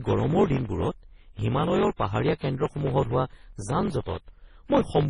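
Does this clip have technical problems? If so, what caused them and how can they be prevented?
Yes. Block size mismatch (truncated) runs through the whole clip, from start to end. One processing stage writes blocks longer than the next stage reads, so the tail of every block is discarded. Those regular cuts produce a buzz at 45.9 Hz, and the speech runs 1.07 times too fast because part of each block never plays. The pattern fits blocks of 1024 samples being written into a stage that reads shorter ones. To prevent it, make every stage in the chain use the same block size, or buffer and carry over the leftover samples instead of dropping them.

Heavy MP3-type compression damage is also present throughout. The speech sounds watery and swirly, attacks are smeared, and nothing remains above 10.5 kHz. This is likely caused by MP3 encoding at a very low bitrate, consistent with about 24 kbps. 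With so few bits, the encoder zeroes weaker frequency lines, which flicker on and off from frame to frame, and it cuts the treble at a fixed point. To prevent it, encode at a much higher bitrate or keep the audio in a lossless format.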